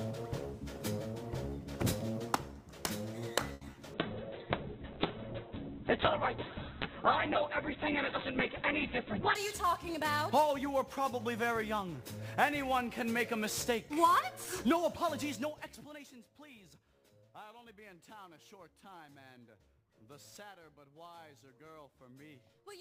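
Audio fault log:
throughout: sample clock jitter. The converter clock wanders by around 10 microseconds rms, so samples land early or late and the error scales with waveform slope. This adds a hiss-like roughness roughly 20 dB below the signal, strongest on loud, bright passages and absent in silence.
3.53 to 3.79 s: repeated packet loss (robotic sound). Four holes in quick succession, the longest 80 ms, are patched by extending the preceding sound, so concealment covers 43% of the span. The result is choppy and robotic, with about 30 ms simply missing.
3.94 to 9.42 s: call bitrate drop. The encoding coarsens sharply, consistent with the rate falling from around 64 kbps to about 6 kbps for 5.44 s. Audio bandwidth shrinks from 20 kHz to 4 kHz, so the sound turns muffled and rough until the rate recovers at 9.42 s.
8.86 to 9.60 s: jitter buffer speed-up. The receiver trims short pitch-period slices repeatedly to drain excess buffered audio, removing around 50 ms overall. 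Playback runs at 107% speed with unchanged pitch, which is fast enough to sound hurried across this stretch.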